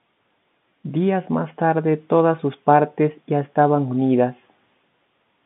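No technical faults can be heard in this speech.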